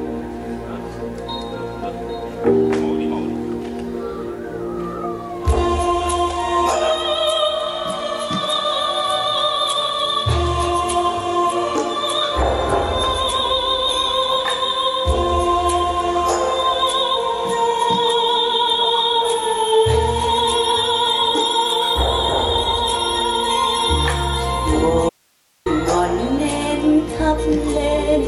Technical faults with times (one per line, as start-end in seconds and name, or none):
25.09-25.66 audio dropout to a faint residue